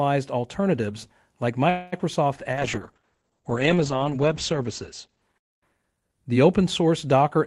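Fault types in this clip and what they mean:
Call audio freeze: From 1.69 to 1.94 s the sound stalls and the last moment is stretched into a fading buzz for about 0.23 s. The audio then resumes exactly where it paused, with nothing skipped, so the rest of the clip runs about 0.23 s late. The cause is likely late packets draining the jitter buffer. Unlike concealed packet loss, this inserts time into the audio and removes none.
Short concealed packet loss: Just after the freeze, around 1.98 to 2.01 s, about 20 ms of audio never arrives in time. The receiver briefly extends the preceding sound and then blends back into the real signal, which leaves a quick smear or wobble. Unlike the freeze, the timing does not shift: a sliver of the original is lost and only partly papered over, rather than paused and then continued intact.
Call bitrate drop: From 2.52 to 6.80 s the encoder is pushed from 32 kbps down to 9 kbps, and it stays at the lowest rate for nearly 2 s. 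The coding turns coarse and watery, and the top end narrows from about 20 kHz to 8 kHz, so the sound is audibly muffled. This lasts seconds and then clears, unlike the brief dropouts, which disturb only short moments.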